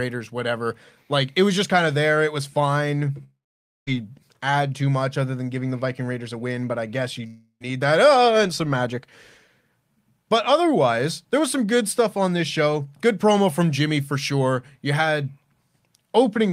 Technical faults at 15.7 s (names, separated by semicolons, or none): none